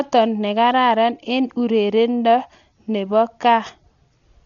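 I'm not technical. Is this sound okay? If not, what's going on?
No. The speech sounds dull and muffled from start to finish, because nothing above about 7 kHz gets through, so the crisp edges of consonants are gone. Around the voice there is a rough, fluttering grain. This is likely Dolby Digital compression squeezed hard: to save space the encoder drops the top of the sound and leaves many fine details empty, and the player fills those gaps with noise, which you hear as that flutter.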